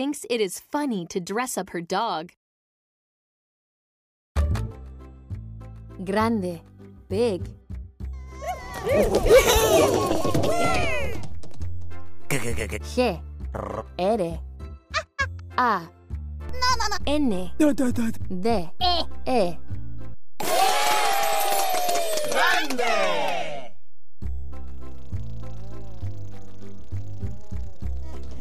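A DC step at 10.12 s shifts the zero line of the waveform by about -23 dBFS, heard as a low thump as the offset switches in, and a second thump follows at 12.61 s when it steps back out. A second DC step arrives at 16.49 s, about -24 dBFS, with another thump, and this offset holds to the end of the clip. Throughout both steps the sound itself carries on unchanged above the shifted baseline.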